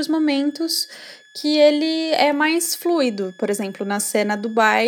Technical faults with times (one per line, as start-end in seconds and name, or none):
0.00-4.87 switching supply whistle